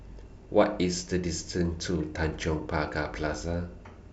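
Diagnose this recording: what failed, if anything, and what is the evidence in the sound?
That's DAB burbling, a reception-side codec failure: between 2.15 and 2.26 s the speech picks up short blips of noise in single sub-bands as bit errors slip past error correction into the MP2 data. The errors hit about ten frames.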